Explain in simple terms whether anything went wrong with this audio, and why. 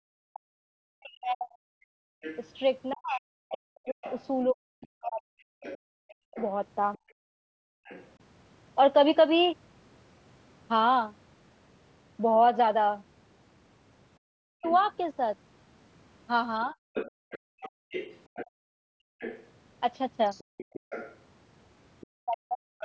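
Yes, several things went wrong in this speech recording, all tied to the call's echo canceller.

Background gated by the echo canceller: the quiet room sound underneath briefly vanishes, for a split second right at the start (0.00 to 0.04 s), then for nearly a second from 6.98 to 7.85 s, and in on-and-off gaps adding up to a second or two between 17.11 and 20.83 s. Each time it falls close to silence and then comes back. This happens because the echo canceller clamped the microphone hard while the loudspeaker was playing, and released it afterwards.

Speech suppressed in double talk: the talker's voice sinks, thins out or cuts off in pieces. This happens across most of the stretch from 0.32 to 6.37 s, about four seconds of it in total, then in briefer dips between 14.39 and 16.79 s and again from 22.22 to 22.68 s. The drops go nearly to silence. The likely cause is both people talking at once: the canceller couldn't tell the talker apart from the loudspeaker echo, so it pushed both down.

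Other side's voice leaking through: a second, fainter voice sits well below the talker from 2.21 to 8.07 s and again from 14.66 s to the end. This is likely the far end playing from the device's loudspeaker and not being fully removed by the echo canceller.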